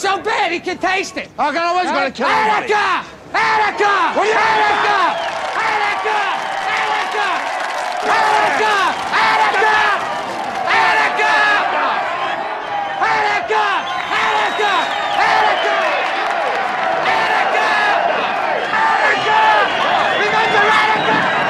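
No technical faults can be heard anywhere in this clip.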